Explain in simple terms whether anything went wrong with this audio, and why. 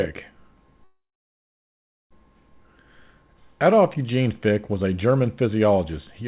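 A call audio freeze interrupts the speech from 0.84 to 2.13 s. A short fading sound is followed by about a second of silence, and then the speech resumes where it stopped with nothing lost. The likely cause is delayed network packets emptying the receiver's buffer.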